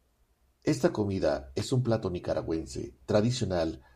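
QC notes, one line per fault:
1.60–1.71 s, loose connector crackle: for about 0.12 s, just before "un plato nicaragüense", a worn contact makes and breaks, chopping the signal into irregular scratching. The waveform shows jagged dropouts and spikes, and the spectrogram shows scattered broadband vertical streaks.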